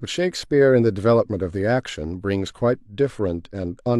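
No technical faults are audible.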